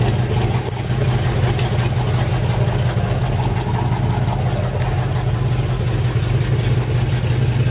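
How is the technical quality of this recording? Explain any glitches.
No glitches can be heard, and the audio arrives intact through what sounds like a narrowband call path, with nothing above 4 kHz, which points to G.711 mu-law coding at 64 kbps.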